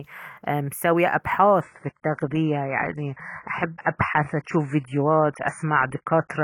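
At 1.61 s, just after "ايه مسوية ابحاث", the speech switches abruptly to an adaptive stream at a lower bitrate. The treble stops near 10.5 kHz and codec artefacts thicken. The drop fits a fall from about 96 to 16 kbit/s AAC. It lasts to the end, with no gap.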